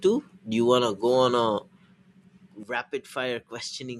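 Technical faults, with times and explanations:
2.63 s to end: sudden gain jump, sound and noise floor both falling about 10 dB at once, likely an unramped gain change; waveform steps down, spectrogram dims evenly.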